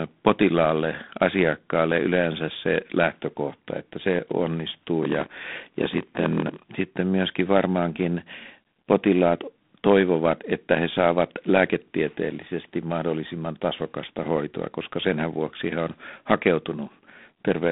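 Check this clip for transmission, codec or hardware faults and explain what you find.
Two faults are present: a low-bitrate telephone codec across the whole clip, and a block size mismatch between about 5.01 and 6.58 s.

G.726 ADPCM, throughout: this speech has passed through G.726 at 24 kbit/s. The coder sends only 3 bits per sample, each describing the difference from an adaptive prediction rather than the waveform itself, so quantisation noise is high. It is heard as a plainly audible rasping hiss that rises and falls with the speech level. The band is telephone-limited, roughly 200 Hz to 3.6 kHz, with nothing above 3.8 kHz.

Block size mismatch (padded), 5.01 to 6.58 s: one stage hands over blocks shorter than the next stage reads, and the shortfall in each block is filled with silence. A brief gap therefore recurs every block, producing a buzz at 43.1 Hz, which fits a 1024-sample read block. 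The inserted gaps also stretch the passage, so the speech runs at 0.938 times normal speed, roughly 6% slow, for that stretch.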